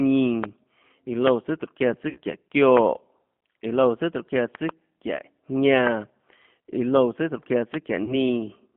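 Speech carried over a G.729 codec line, with plainly audible coding damage throughout. The 8 kbit/s codec rebuilds each 10 ms frame from a vocal tract filter, a pitch predictor and a few pulses, so the sound is rough and slightly synthetic. The telephone band runs from about 150 Hz to 3.4 kHz, and on a spectrogram everything above 3.4 kHz is empty, with smeared, grainy harmonics below. VoIP packet loss concealed by the speech codec occurs at 2.09–2.20 s, covering 60 ms of missing audio (which fits three 20 ms packets), and again at 8.04–8.18 s, covering 40 ms (two packets). Each time the decoder stretches its last pitch and filter into a buzzy tone or coloured noise that fades while it lowers the gain frame by frame. Because every frame builds on the one before it, the sound stays weak for a while after the packets return. On a spectrogram each gap shows as a repeated pattern that dims across the gap, and the waveform shows a regular, decaying sound there instead of the irregular shape of speech.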